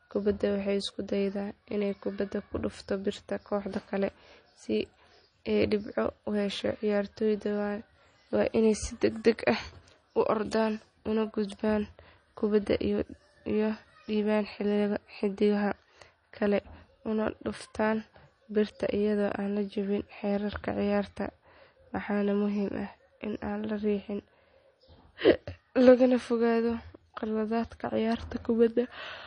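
Speech that sounds watery and swirly from start to finish, with nothing above about 9.8 kHz, so the top of the s sounds is dulled. The damage is plainly audible throughout. This is likely MP3 compression at a low bitrate, one that fits about 32 kbps. Short of bits, the encoder cuts the treble at a fixed point and zeroes weaker frequency components, which then flicker on and off between frames and produce that churning texture.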